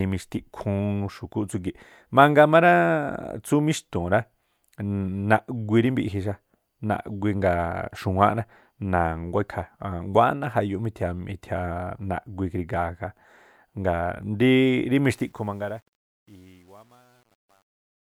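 Truncation distortion on a fade runs from 15.14 s to the end at 18.19 s. The fade-out begins around 15 s and runs to 18.2 s, but the gain stage behind it drops low-order bits without dither, consistent with a 10-bit path. As the speech sinks toward the smallest step, the waveform collapses into coarse square stairs. From 15.71 s onward the tail turns gritty.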